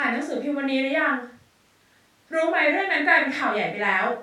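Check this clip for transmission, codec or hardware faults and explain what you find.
No transmission, codec or hardware faults are audible anywhere in the speech.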